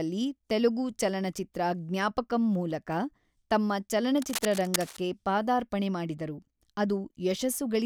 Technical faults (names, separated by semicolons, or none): cable scratch noise